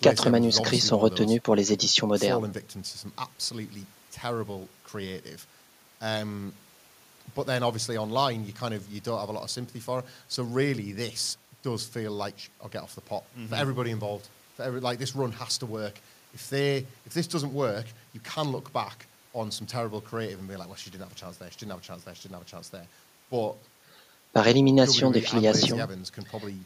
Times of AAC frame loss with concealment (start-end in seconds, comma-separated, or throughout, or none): none